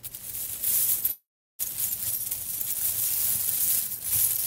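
A recording of everyday sounds that stalls from 1.11 to 1.61 s: the last sound is stretched into a brief fading buzz, then about 0.37 s of silence, before the audio resumes where it stopped, now running about 0.48 s late with nothing lost. This is a call audio freeze, likely from packets held up in transit until the jitter buffer ran empty.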